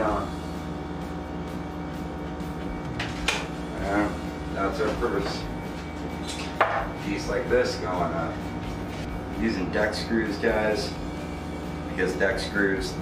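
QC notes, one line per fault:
Nothing stood out on listening.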